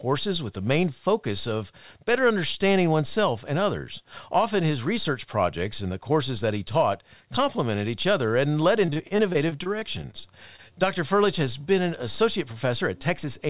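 From 8.86 to 10.73 s, just after "each other and led", repeated packet loss makes the speech choppy and robotic. Fifteen short gaps, none longer than about 33 ms, are patched by stretching the previous sound. Throughout, nothing is heard above 4 kHz, which points to a narrowband G.711-style call path.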